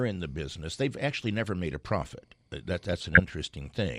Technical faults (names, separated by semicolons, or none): DAB burbling